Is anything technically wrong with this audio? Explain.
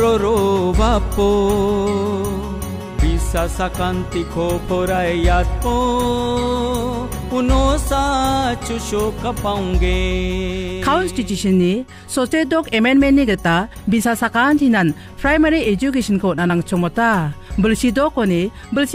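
No, nothing is technically wrong with this audio.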